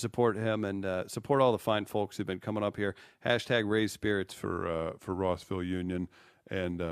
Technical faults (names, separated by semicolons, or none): wrong sample rate